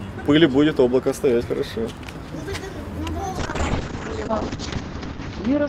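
From 3.39 s to the end, the sound turns rough and muffled as highs above 8 kHz vanish: a call bitrate drop, from 48 to 7 kbps.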